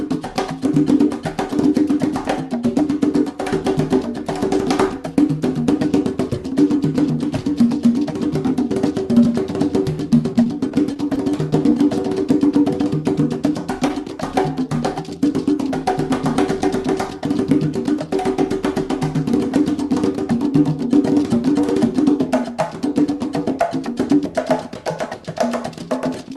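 Brief ticks and smears between 9.84 and 11.73 s are scattered short gaps: the receiver filled about ten tiny dropouts, none much over 15 ms, by extending the preceding sound.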